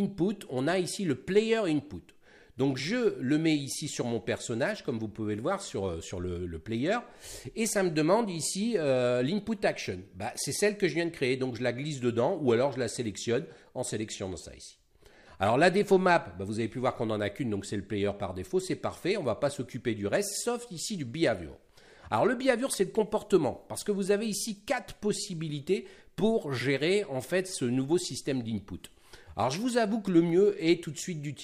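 No technical faults can be heard in this audio.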